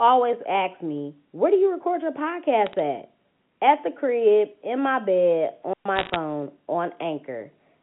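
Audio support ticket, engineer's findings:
Bit errors on a digital phone line: sharp ticks and crackle at 2.66–2.73 s after "do you record your" and 5.96–6.16 s. Flipped bits in the 8-bit log-scale G.711 A-law samples produce single-sample spikes.

Digital wireless dropout: clean near-silent hole at 5.73–5.86 s, right after "crib in my bed", about 123 ms, no noise burst. The wireless receiver lost too much data and muted with a brief fade.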